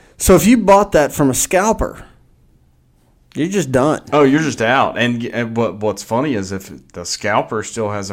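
A short recording of speech, with no technical fault to report. There is nothing in it that calls for a time or a cause.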